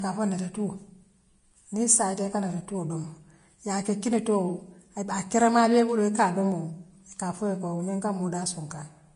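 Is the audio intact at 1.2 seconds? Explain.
No. At 1.2 seconds the speech carries Vorbis compression damage, and it runs through the whole clip. Nothing is heard above 10.5 kHz. The treble below that is hissy and grainy, and consonant onsets sound smeared. The likely cause is a low-quality Vorbis encode, which fits a bitrate around 32 kbps. At that setting the encoder lowers the cut-off and quantises the upper band so coarsely that fine detail turns into noise of similar energy.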